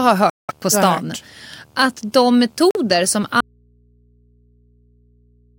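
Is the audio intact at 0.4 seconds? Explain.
No. A Bluetooth dropout silences the speech from 0.30 to 0.51 s, and it resumes at "på stan" as though it had kept playing. The likely cause is audio packets arriving too late at the headphones and being discarded. Beneath this, a video or display buzz at 75 Hz with hash above it sits about 40 dB below the signal, picked up from a screen or video cable.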